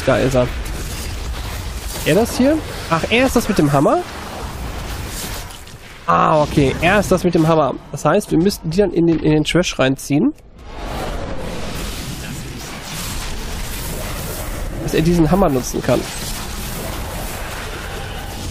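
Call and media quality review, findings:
Corrupt frame decoded, 5.84–5.88 s: brief chirpy noise burst, about 40 ms, peaking around -20 dBFS. Probable component: decoder accepting a damaged frame. Bit errors scramble gains and spectral codes, misplacing energy across roughly three consecutive frames. Differs from packet-loss concealment: no smoothed or repeated fill, just foreign, wrongly placed energy; differs from a clipping click by its frame-length spread.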